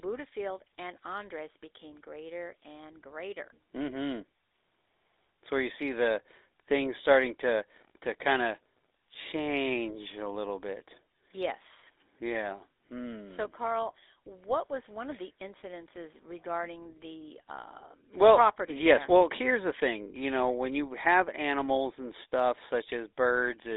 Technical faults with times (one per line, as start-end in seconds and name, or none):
0.00-23.77 GSM full-rate codec